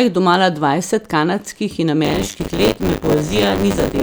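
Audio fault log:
2.04–4.02 s, buffer tearing: after "domala dvajset kanadskih in", a robotic 100 Hz rattle persists. Roughly a third of each 10 ms period replays audio about 40 ms old, hard-joined on both sides. Unlike hum, it exists only while signal plays.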